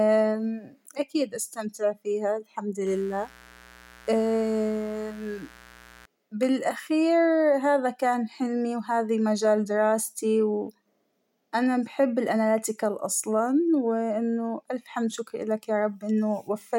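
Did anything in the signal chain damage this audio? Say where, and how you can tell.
Yes. Mains buzz enters in the analogue wiring stage, from 2.86 s to 6.06 s, starting just after "أكيد أستمتع فيها الحمد" and clearing before "بالأخير هذا كان حلمى". A steady, raspy buzz sits about 25 dB below the speech. It is built on 60 Hz harmonics that climb into the kilohertz range. That points to switching spikes from a dimmer, rectifier or unshielded cable, occurring twice per mains cycle. A pure hum would be a smooth low tone without that rasp.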